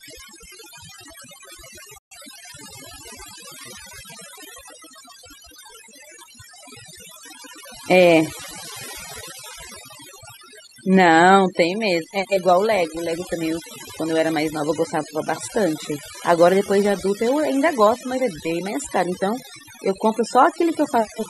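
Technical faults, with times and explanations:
Throughout: overdone noise removal. Background drops and breaks up into twinkling specks, flickering band by band rather than dulling evenly.
1.98–2.17 s: digital broadcast dropout. Sound fades out over 8 ms, stays silent about 128 ms, then resumes. A clean mute, not clicks or stutter, fits a few lost frames.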